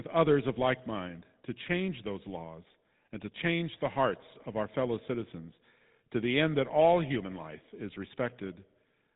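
GSM full-rate codec damage runs through the whole speech clip, from start to finish. The coder reduces the voice to a vocal-tract filter excited by a sparse, regular pulse train, so fine detail in the excitation is thrown away and the voice takes on a plainly audible buzzy, gravelly roughness. Nothing survives above about 3.8 kHz, which leaves the sound dull and boxy. The level of damage fits a low bitrate of around 13 kbps.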